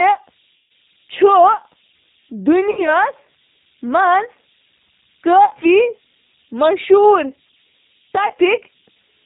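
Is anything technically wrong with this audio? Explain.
Yes, there are three faults in this speech clip.

Converter idle tones run throughout: an undithered delta-sigma converter settles into repeating bit patterns on small signals, producing a faint whistle around 3 kHz, about 38 dB below the speech, most noticeable in pauses and as grain under quiet passages.

The G.729 codec is present throughout, plainly audible. This 8 kbit/s codec models speech with a vocal tract filter, a pitch predictor and sparse pulses, discarding everything above 4 kHz, so the speech sounds band-limited, slightly rough and synthetic.

VoIP packet loss concealed by the speech codec occurs at 0.56–0.72 s, 2.71–2.88 s, 5.45–5.55 s and 8.28–8.34 s. The decoder extrapolates from its last pitch and filter with falling gain, so the sound smears into a fading buzz and stays weak or distorted briefly after packets resume.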